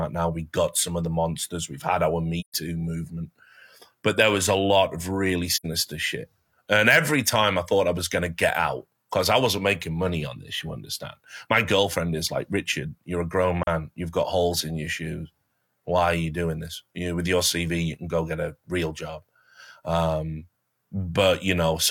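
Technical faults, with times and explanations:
2.40–2.54 s, 5.54–5.66 s and 13.63–13.68 s, AAC frame loss with muting: soft-edged holes, and a brief dip at 13.63 s, where lost frames decode to silence and overlapping windows fade around them.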